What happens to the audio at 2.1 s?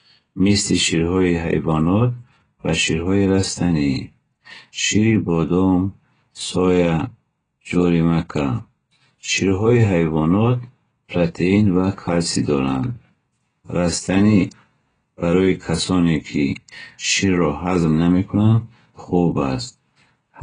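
At 2.1 s the speech is dull, with nothing above about 9.7 kHz, and has a warbling, smeared texture on sustained sounds and sibilants. This runs through the whole clip and is likely heavy AAC compression at a low bitrate near 16 kbps, where the encoder drops the top band and coarsely quantises what remains.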